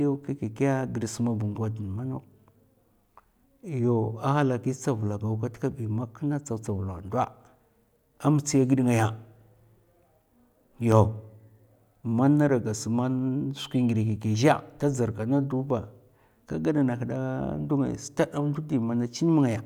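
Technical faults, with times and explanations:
10.92 s, block of digital silence: the speech drops to silence for about 1.45 ms and then resumes, which fits a single 64-sample block left unfilled when the output buffer was not written in time. There is no fade on either side, so the waveform jumps abruptly to silence and back. Each edge produces a broadband step, and because the gap is so brief it is heard as a tick or dip rather than an audible hole.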